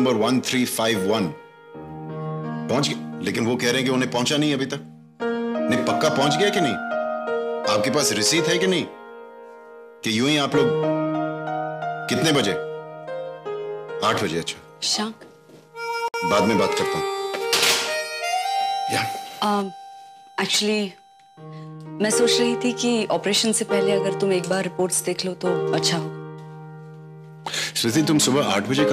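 Two separately encoded pieces were joined at 16.08 s without trimming the encoder's start-up delay and last-frame padding, leaving a gap at the join of encoded pieces. The sound drops out for 58 ms, to 16.14 s, with smeared edges, then resumes where it stopped.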